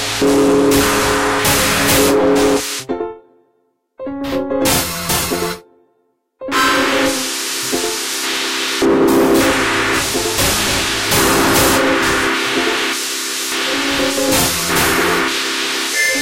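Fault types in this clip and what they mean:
hard clipping: Across the whole clip the louder moments have a gritty, broken edge, with added brightness that the underlying sound doesn't have. The signal was driven about 11 dB beyond what some stage could pass, so the tops of the waveform were sliced flat. Roughly 7 percent of the samples ran into that ceiling. Those squared-off peaks generate harmonics well above the original content, which is the distortion heard on each loud passage.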